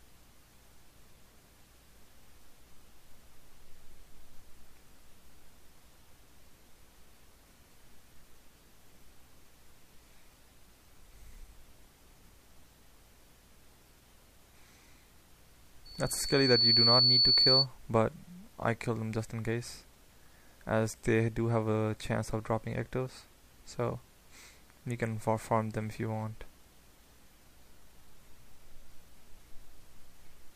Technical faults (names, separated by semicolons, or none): loudspeaker feedback squeal